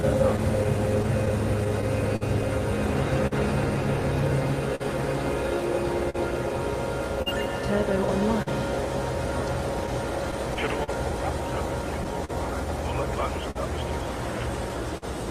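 From the start, clock drift between sender and receiver runs through the whole clip. The sending clock is about 3 percent slow, so the receiver's buffer keeps draining and it repeats short stretches, producing small irregular hiccups. On a spectrogram these appear as brief duplicated slices and occasional thin vertical seams.

Scattered short gaps recur from 0.01 s to 15.04 s, about twenty in all. Each lost packet was patched by extending the preceding sound, roughly half a second in total, the longest near 50 ms. They are heard as ticks and smears. The waveform shows short flattened, repeated segments, and the spectrogram shows smeared bands.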